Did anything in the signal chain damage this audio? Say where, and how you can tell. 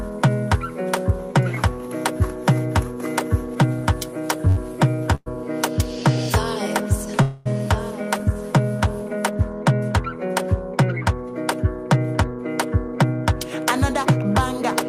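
Yes. A short stall from a late packet at 4.48 s: a network-stage fault where the jitter buffer ran dry, so the receiver held the last sound for 86 ms before resuming from the same point. You hear a drawn-out sound with a faint buzz or dip, but nothing missing.

Call audio freeze at 5.15 to 5.28 s and 7.22 to 7.48 s, likely caused by packets delayed in transit. The receiver extended the last sound for 111 ms, ending in about 30 ms of silence, then for 237 ms with no silence, before continuing unchanged.

Jitter buffer speed-up from 12.31 to 14.61 s: after the earlier delays the buffer held surplus audio, so the receiver repeatedly trimmed pitch-period-sized slices, about 70 ms in total. The sound plays roughly 3% faster at the same pitch.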